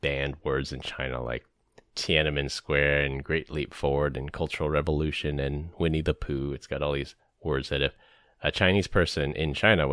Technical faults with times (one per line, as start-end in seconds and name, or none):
none